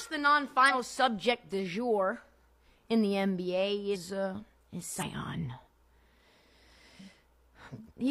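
Speech with compressed frames skipped at 0.65 s (before "subject du jour"), 3.90 s (before "uh is") and 4.97 s (after "uh is"), with roughly 50, 150 and 150 ms of audio missing where damaged or absent frames weren't decoded, so the sound jumps ahead. On the waveform each shows as an abrupt splice, and on the spectrogram as a short vertical seam.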